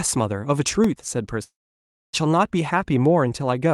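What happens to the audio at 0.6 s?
At 0.6 s the speech is hit by processor overload crackle, running from 0.58 to 1.09 s. The processor missed a run of very short buffer deadlines, roughly 0.7 ms each. Each miss dropped in a brief hard-edged gap of silence. Together they make a gritty crackle.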